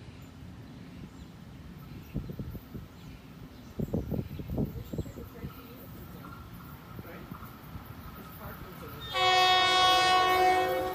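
Nothing here calls for comment, since there isn't a single glitch, dropout or other technical hiccup to point to anywhere in the audio.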